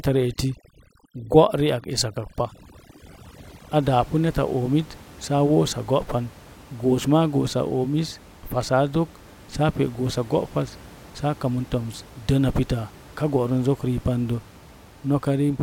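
From 0.0 to 3.8 s, overdone noise removal suppresses bands too aggressively, leaving twinkling specks over near silence, unlike the steady room noise about 23 dB down afterwards.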